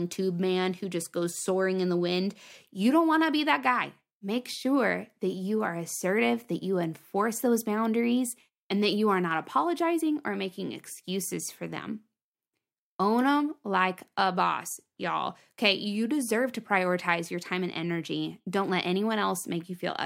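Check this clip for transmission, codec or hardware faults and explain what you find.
Nothing here points to a transmission, codec or hardware problem; the speech comes across steady and intact the whole way, with no gaps, glitches or odd shifts to flag.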